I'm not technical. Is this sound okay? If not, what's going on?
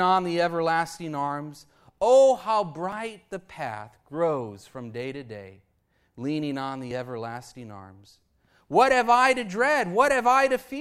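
No. The recording was likely saved in 4-second chunks, losing a tiny sliver at each join (audio missing between chunks). You hear brief skips at 2.92 s, just before "the path grows from", and at 6.91 s, between "to day leaning on" and "everlasting arms".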